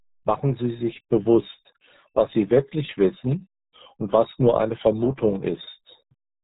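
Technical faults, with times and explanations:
Throughout, RealAudio 14.4 codec. The speech is muffled and gargly from start to finish. Nothing passes above about 3.8 kHz, so sibilants and consonant edges are lost. This early dial-up speech codec squeezes the signal into a tiny data rate, consistent with about 8 kbit/s. At that rate it keeps only a rough outline of the voice and discards fine detail. The damage here is heavy, leaving a smeared, watery texture on every syllable.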